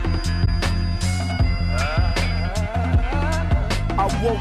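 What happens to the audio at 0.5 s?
At 0.5 s two faults overlap. A thin, steady feedback whistle near 4.9 kHz runs from the start to 2.56 s, sitting roughly 20 dB under the sound and swelling and fading slowly in level. It is heard as one pure high tone that holds without growing. The likely cause is a loudspeaker-to-microphone loop sitting right at the edge of oscillation, so that single frequency keeps ringing without running away into a howl.

Inside that span, from 0.45 to 0.48 s, there is a corrupt frame concealed. A damaged AAC frame was detected by the decoder and replaced, either muted or filled with a sign-scrambled copy of the previous good spectrum. It spans about 30 ms, which fits a single lost frame.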